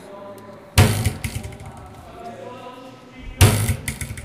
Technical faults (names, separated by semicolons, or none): hard clipping